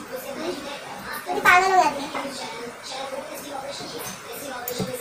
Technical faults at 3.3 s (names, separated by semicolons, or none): wrong sample rate